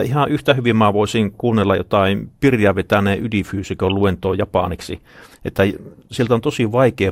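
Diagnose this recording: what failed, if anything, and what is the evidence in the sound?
DAB burbling, codec stage, 3.90 to 3.94 s. A brief burst of noise blips crosses the speech. Weak-reception bit errors corrupt the MP2 sub-band data.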